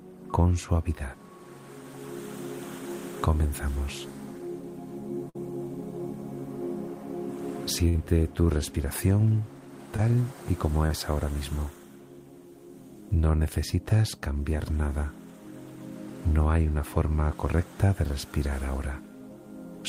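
Two bursts of packet loss, at 5.29 to 5.37 s and 7.89 to 7.96 s, each drop about 60 ms; the receiver extends the last sound and fades it out, then jumps ahead. Shorter concealed packet loss at 9.96 s and 10.86 to 10.92 s, missing 20 and 40 ms, leaves a brief smear before the audio blends back.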